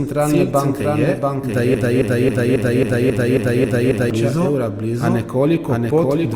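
From the start, the speech carries a doubled audio track: a second full-band copy, about as loud as the first, trails by roughly 0.7 s, with no decay or room colour. It is likely a second capture through a slower path, mixed back in.

From 1.74 s to 4.10 s a broken-record loop takes over: a 0.27 s fragment repeats back to back nine times, and the speech that belonged there is gone. A stalled player or stream that kept resending its last buffer is the likely cause.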